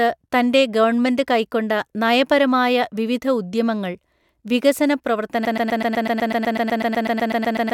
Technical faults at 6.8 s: broken-record loop

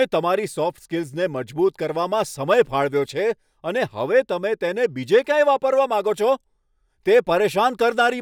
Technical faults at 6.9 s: none

